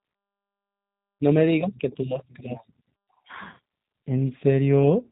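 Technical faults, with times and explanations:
Throughout, G.729 codec: the speech is band-limited, with nothing above 3.8 kHz, and the codec damage is plainly audible as a rough, slightly synthetic edge. That fits an 8 kbit/s G.729-style coder. It doesn't send the waveform. It sends a vocal tract filter, a pitch predictor and a handful of pulses per short frame, and the decoder rebuilds the speech from those. The reconstruction loses fine detail, which is where the buzzy, artificial quality comes from.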